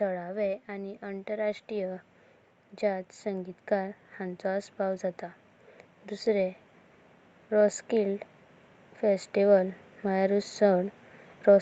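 From 2.8 to 5.11 s, automatic gain rising: the gain control judged the input too quiet and lifted it about 4 dB, so speech and background swell together.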